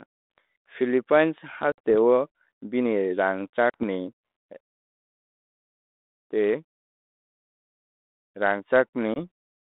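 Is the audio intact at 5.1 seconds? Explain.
Yes, the audio at 5.1 seconds is intact, with no fault at that moment.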